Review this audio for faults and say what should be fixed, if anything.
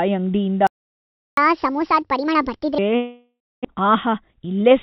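A playback stall cuts the speech off at 0.67 s, leaving about 0.7 s of silence until 1.37 s. The player likely ran dry or its thread was blocked. On a waveform this shows as a flat gap with sharp edges. Keep the output thread unblocked and the buffer topped up.

A catch-up at higher speed follows from 1.37 s to 2.78 s. The backlog is resampled at 1.5 times speed, so pitch rises by roughly seven semitones. On a spectrogram the harmonics shift upward and spread apart for that stretch. Drain a backlog gradually, or with pitch-preserving time compression.

A long network dropout runs from 2.96 s to 3.67 s. The receiver extends the last sound as a fading buzz or hiss, then leaves about 270 ms of silence. About 400 ms of speech is never heard, and timing shifts by roughly 300 ms, likely from lost packets. A spectrogram shows smeared, repeated harmonics fading to blank. Stronger loss concealment and redundancy would shorten this.

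A jitter buffer speed-up from 3.74 s to 4.71 s plays the speech at about 117% with unchanged pitch, trimming roughly 200 ms in small pitch-period cuts. It sounds hurried. The waveform shows syllables packed closer, with tiny splices. Lower the target delay more gently.

Throughout, the G.711 call path limits content to 4 kHz.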